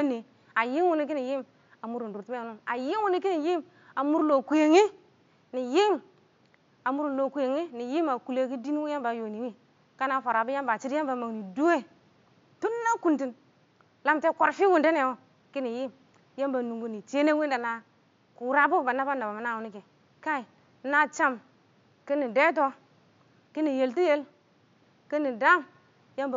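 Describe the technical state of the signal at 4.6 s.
At 4.6 s the speech signal is intact, with only the room's own background noise, about 37 dB below the speech, present beneath it.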